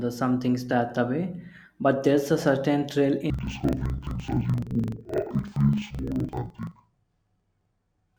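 A speech clip. From 3.30 s, right after "there's a certain thrill", to the end, the sound drops an octave, doubled and choppy at about 23.4 Hz. This is interleaved audio read as planar, in blocks of about 43 ms, which fits a 2048-sample block.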